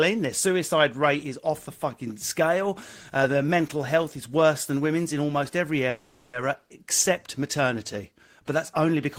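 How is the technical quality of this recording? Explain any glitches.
There is one glitch, a call audio freeze from 5.89 to 6.36 s, right after "women's in almost every" and before "except maternity". Packets were likely delayed and the jitter buffer emptied, so the receiver stretched the last sound into about 440 ms of fading buzz or hiss. Speech then resumes where it stopped, with nothing lost, just running 440 ms later.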